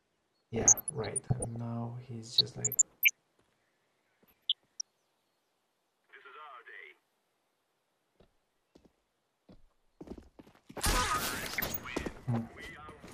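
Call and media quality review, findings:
Short noise blips at 0.56–1.56 s, 2.37–3.10 s, 4.26–4.81 s and 11.38–11.81 s. DAB burbling: weak reception, bit errors around 0.4–0.7 percent corrupting MP2 sub-band levels.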